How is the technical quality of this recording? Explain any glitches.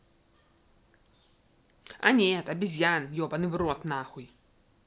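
No technical glitches can be heard in this recording.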